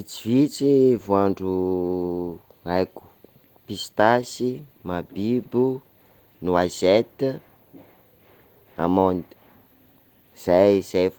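Nothing goes wrong in this speech recording at any point, so there's really no technical fault to point to.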